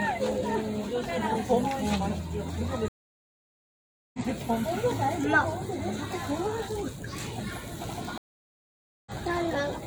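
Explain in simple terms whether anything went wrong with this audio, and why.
Stream reconnects at 2.88 to 4.19 s and 8.18 to 9.12 s: the connection dropped, the player went silent for 1.25 s and 0.88 s, then rejoined mid-stream. The audio picks up further along, skipping roughly a second and a half, then a fraction of a second.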